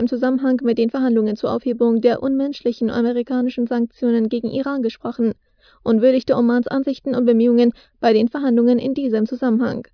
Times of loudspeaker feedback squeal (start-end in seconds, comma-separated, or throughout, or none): none